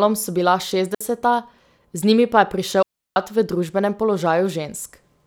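Speech with two digital wireless dropouts: a 60 ms mute at 0.95 s and a longer 340 ms hole from 2.82 to 3.16 s. The receiver lost too much data and muted with a quick fade, leaving clean near-silence with no hiss or crackle around the gaps, unlike an analog wireless dropout.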